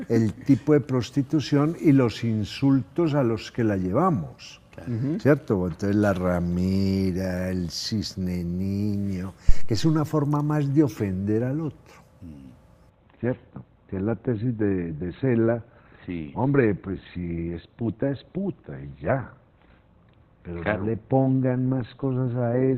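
The audio carries two faults. At 9.49 s a phantom power thump lands: a deep, low-frequency knock that dies away in about 100 ms and is over by 9.94 s. It comes from a supply switching on a live input. Unlike a plosive or handling bump, it is a single electrical step with a clean exponential decay rather than an irregular acoustic shape. From 12.90 s to the end, an adaptive stream at a lower bitrate takes over. Everything above 4.2 kHz vanishes and the sound turns smeared, which fits a switch from about 64 to 12 kbit/s Opus. It differs from a network dropout because there is no gap, only a sudden, lasting fall in quality.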